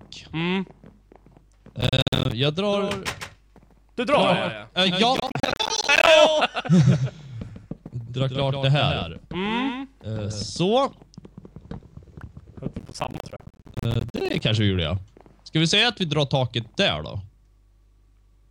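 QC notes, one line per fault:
1.81–2.32 s, 5.17–6.07 s and 12.79–14.41 s, processor overload crackle: three bursts of gritty tearing laid over the sound. Each one is made of many tiny dropouts to silence with hard edges, dozens of them in quick succession. The processor is missing its deadline for one short buffer after another, and the gaps are about the size of a buffer of around 10 ms. The crackle stops as soon as the load eases.
2.72–10.60 s, doubled audio track: a second full-band copy of the sound trails the original by around 150 ms, roughly 5 dB quieter. It has no decay and no room colour, so it comes across as a flat slapback rather than an echo. It cuts in and drops out abruptly at those points, which most likely means a second capture path is running late and its output is being mixed back in.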